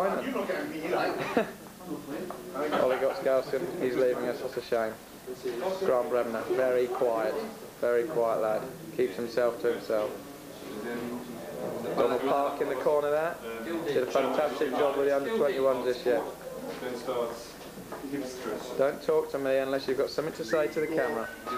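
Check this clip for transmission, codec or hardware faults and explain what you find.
One fault runs through the whole clip: low bit depth with dither. The audio has been quantised to very coarse resolution, consistent with roughly 7 bits, with dither added before rounding. Dither decorrelates the rounding error from the signal, so instead of grainy distortion the error becomes a steady, even white hiss sitting around 25 dB below the signal. It is constant from start to finish and does not pump or change with level.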